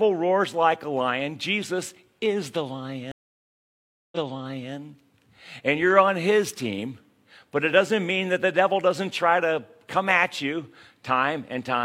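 At 3.12 s, just after "is the", the speech cuts out in a stream reconnect that runs to 4.72 s. The connection dropped, the player went silent for 1.0 s, then reconnected and started a new decoder mid-stream. When the audio returns it has jumped back 0.60 s, so the listener hears a short stretch of speech a second time, consistent with the server resending a burst of buffered data after the reconnect.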